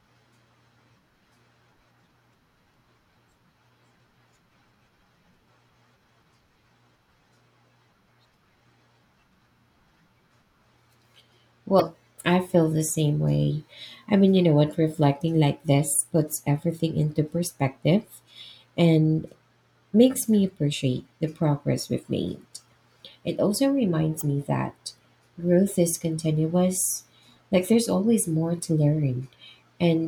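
At 11.77 to 11.81 s, and again at 24.18 to 24.22 s, the speech breaks into a brief glitch, about 40 ms each time. That's damaged data in the compressed stream: bytes in those frames were lost or overwritten, so the decoder misread them, lost sync and had to hunt for the next valid frame header. What you hear is that scramble, a short disruption before normal decoding picks up again.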